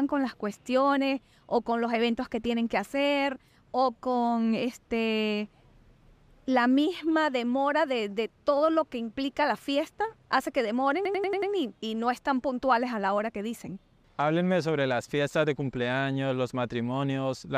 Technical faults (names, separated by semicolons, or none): system hang loop